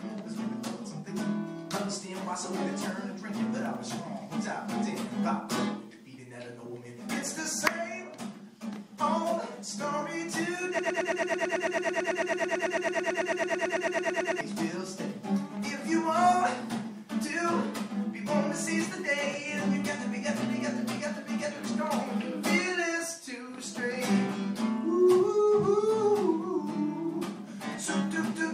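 A broken-record loop runs from 10.79 to 14.41 s. A 110 ms fragment repeats 33 times back to back. The player or stream likely stalled, losing that stretch of audio.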